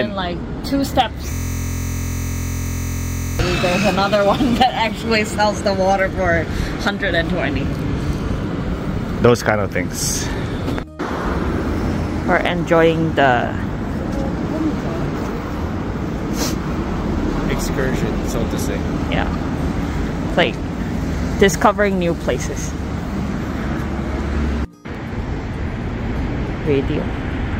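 From 1.33 s to 3.39 s the audio falls into a system hang loop: the driver or host stopped supplying new data while the sound hardware kept replaying the same ring buffer. Each loop lasts 23.22 ms, which fits a 1024-sample buffer, so the repeats merge into a steady buzz at 43.1 Hz. On a waveform the same short segment repeats exactly, nearly ninety times. A spectrogram shows evenly spaced vertical striations and a harmonic comb built on 43 Hz.

At 24.95 s there is a block of digital silence only 0.54 ms long. Samples were zeroed, which points to an output buffer that wasn't filled in time or to a calculation that produced invalid values. The signal drops out and returns with no fade, and at this length the gap is heard as a tick or dip rather than silence. The waveform shows a tiny near-flat line between abrupt steps. On a spectrogram it appears as a thin vertical broadband streak.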